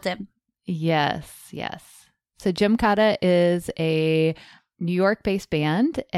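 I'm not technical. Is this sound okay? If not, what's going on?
Yes, nothing in this recording points to any technical problem with how the sound was captured or delivered.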